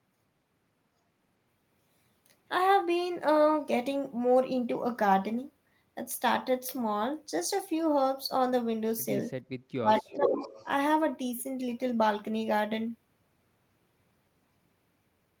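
At 9.45 to 9.49 s the room sound briefly dips by about 14 dB, a 40 ms hole in the background. This is background gated by the echo canceller: while the far-end loudspeaker was active, the canceller clamped the microphone hard, then released it.

From 9.77 to 10.43 s the talker's speech sinks deeply, roughly 25 dB at worst, over about half a second. This is speech suppressed in double talk. Both sides were likely talking at once, so the canceller could not tell the near talker from the loudspeaker echo and attenuated everything.

Overlapping that, from 9.96 to 10.66 s, a delayed copy of the speech trails the original by 449 ms, only a few decibels quieter. This is echo leak. The likely cause is that a loudspeaker on one end fed the microphone, and its echo canceller let part of that pickup through and back down the line.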